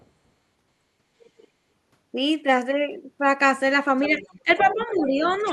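Background gated by the echo canceller at 0.0 to 0.08 s: the room tone dips by about 7 dB for an instant as the canceller clamps the microphone while the loudspeaker plays.

The other side's voice leaking through at 1.2 to 1.47 s: a very faint second voice, roughly 35 dB under the talker, likely echo the canceller failed to remove from the loudspeaker pickup.

It leaks through again from 4.04 to 4.98 s, much louder at around 15 dB below the talker, overlapping speech suppressed in double talk at 4.1 to 4.25 s and 4.43 to 5.22 s. The talker drops by around 10 dB in pieces, likely because the canceller could not separate the near voice from the echo and turned both down.

The other side's voice leaks through once more from 5.25 to 5.52 s, around 20 dB below the talker.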